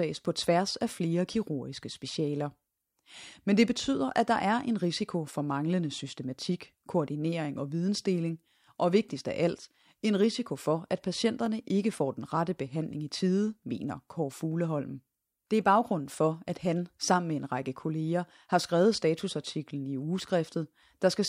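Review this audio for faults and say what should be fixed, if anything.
There are two short overlapping-chunks stutters in the speech: one at 11.46 s, between "en risiko for at" and "ikke får den rette", and another at 19.49 s, right after "række kolleger har skrevet". Each time, about 13 ms of audio plays twice because the next chunk starts before the previous one has finished. That doubled sliver sounds like a small click or hiccup. The spacing fits processing in 4 s chunks. To fix it, make each chunk start exactly where the last one ended, or crossfade and trim the shared overlap so the repeated 13 ms is never played twice.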